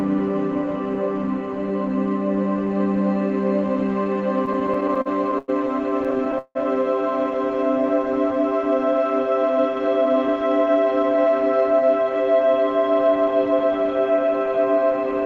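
Repeated stalls (stutter) at 4.45 to 5.5 s and 6.04 to 6.57 s: late packets emptied the jitter buffer, so the last sound was stretched through gaps of up to 167 ms, making the audio drag and stammer.

Jitter buffer speed-up at 9.43 to 11.26 s: an overfull buffer was trimmed by cutting out pitch-period slivers, about 150 ms in all, so the sound runs 7% fast at unchanged pitch and feels hurried.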